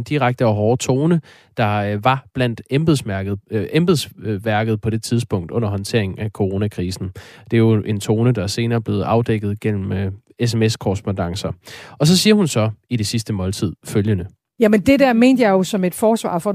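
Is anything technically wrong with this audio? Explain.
No, nothing is technically wrong with this audio.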